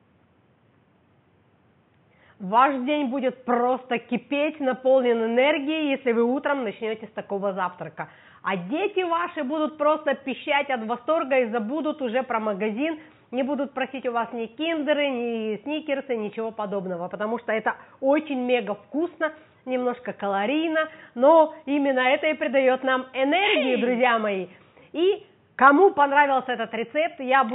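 Nothing wrong can be heard anywhere in this recording.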